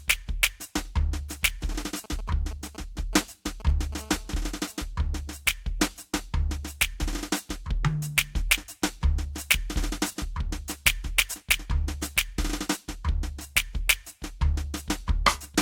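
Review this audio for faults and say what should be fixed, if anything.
From 1.72 to 3.94 s you get GSM signalling bursts: a nearby 2G phone firing short groups of radio pulses that the audio circuit rectifies. That makes a galloping dit-dit-dit of brief 217 Hz buzzes over the music, at roughly 15 dB under it.

Right after, from 3.99 to 4.86 s, there's GSM phone buzz. The phone has gone into a call and is transmitting steadily at 217 bursts a second, giving a hard, raspy 217 Hz buzz full of harmonics. It sits about 26 dB below the music and doesn't follow it at all.

To fix it, keep phones well away from the rig or in flight mode, and use shielded, balanced cabling with RF filtering on the inputs.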